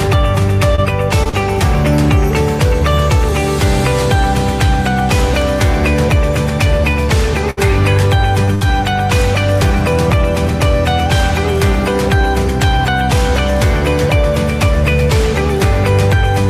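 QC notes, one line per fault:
0.75–0.80 s, short concealed packet loss: about 20 ms of audio never arrived and was bridged by extending the preceding sound, leaving a brief smear.
1.24–1.34 s, short concealed packet loss (two in quick succession): gaps of about 20 ms and 40 ms filled by continuing the last sound, heard as a wobble.
7.50–7.59 s, burst of packet loss: about 60 ms lost in a row. Concealment holds the previous sound and fades it, giving a decaying buzz or hiss before audio resumes with content skipped.
8.45–8.49 s, short concealed packet loss: about 20 ms missing, patched by extrapolating the prior sound, audible as a short smear.
8.55–8.63 s, burst of packet loss: about 60 ms lost. The held, fading fill replaces the missing stretch, and playback resumes further on with that portion gone.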